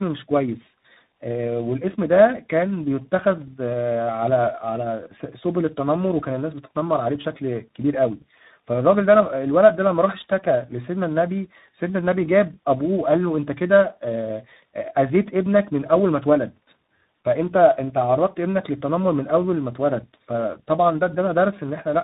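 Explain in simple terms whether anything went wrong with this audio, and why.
Tandem speech coding throughout: the speech passed through three codecs in a row, each re-coding the last one's output, leaving it rough, warbly and muffled above 3.8 kHz.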